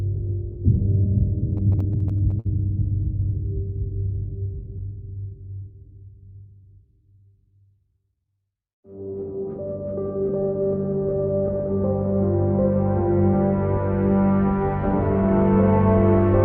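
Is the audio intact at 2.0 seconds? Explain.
No. At 2.0 s you're in the middle of a stretch of repeated stalls (stutter) running from about 1.57 to 2.47 s. Packets kept showing up late, so the jitter buffer ran dry nine times, and each time the receiver stretched the last bit of sound until it could carry on. That covers about 135 ms in all, with the longest hold at 53 ms. Nothing gets lost, but the audio drags and hiccups.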